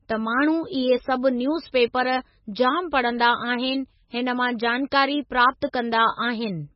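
From start to finish, the speech carries heavy MP3 compression damage. Nothing is heard above 5.6 kHz. The treble stops at that fixed point, so the sound is dull and boxed in. The damage points to a very low bitrate, around 18 kbps. At that rate the encoder likely runs short of bits. It drops weak frequency lines, and they flicker in and out between frames. The result is a watery, swirling texture over the whole clip.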